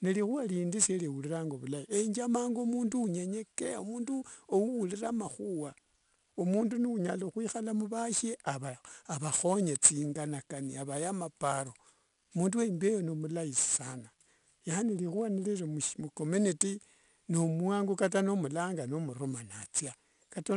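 It's a speech recording with 4-bit ADPCM compression running the whole way through, and the damage is plainly audible. Each sample is coded as a coarse 4-bit jump from a predicted value, so there's a gritty hiss riding on every loud stretch that tracks the level, plus roughness on sharp onsets where the step size can't catch up. Nothing sits above about 10.6 kHz, which fits a 22 kHz sample rate and roughly 88 kbps.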